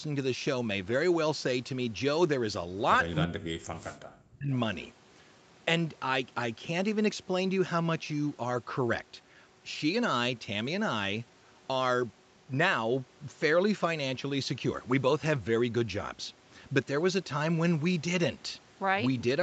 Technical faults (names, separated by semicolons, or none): echo leak; speech suppressed in double talk